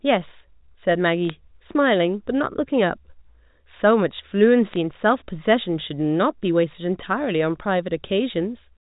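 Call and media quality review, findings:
Bit errors on a digital phone line: sharp ticks at 1.29 s and crackle from 4.72 to 4.76 s. The G.711 mu-law path at 64 kbps band-limits the speech. Flipped bits each corrupt a single logarithmic sample, and sign or high-bit hits jump the waveform. Error rate is a fraction of a percent.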